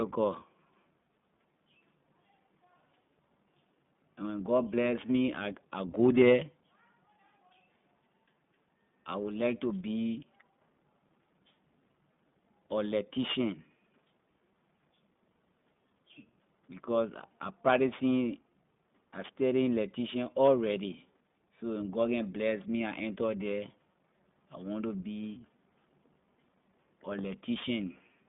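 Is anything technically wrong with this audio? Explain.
Yes, the speech has passed through an iLBC codec throughout. It is band-limited to roughly 150 Hz to 3.6 kHz with nothing above 3.8 kHz, and independently coded 20 ms frames leave a plainly audible rough, synthetic texture consistent with about 15.2 kbps.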